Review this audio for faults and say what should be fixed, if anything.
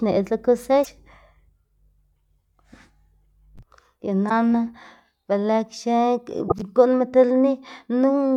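Damaged data in the compressed stream at 0.81–0.87, 4.26–4.31 and 6.45–6.52 s: misread frames and decoder resyncing cause brief disruptions. Re-encode from an intact source and deliver with checksums or error-protected transport.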